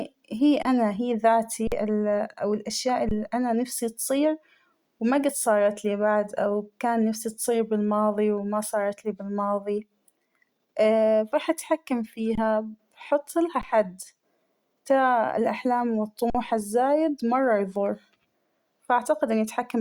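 Six underruns with held sample land at 0.63, 1.67, 3.09 (before "أنا نفسى تصير"), 12.35 (after "راح أتحكم"), 13.61 and 16.30 s (before "الزايد مرة يفور"). The buffer ran dry, the output froze flat for 16 to 46 ms, and live audio was lost while it held.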